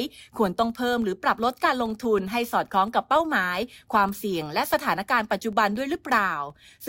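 Throughout the speech, a filter restarted on every block causes a soft tick at 21.5 Hz. It tracks speech level and fits 2048-sample blocks.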